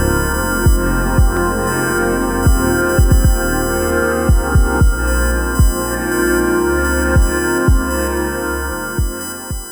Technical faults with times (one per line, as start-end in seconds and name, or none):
0.00-9.72 USB whine